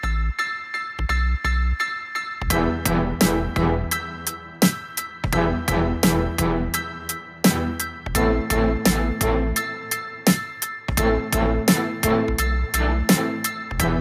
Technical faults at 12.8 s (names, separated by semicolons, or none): none